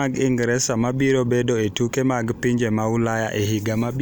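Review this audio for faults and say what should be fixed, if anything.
No faults found; nothing needs fixing.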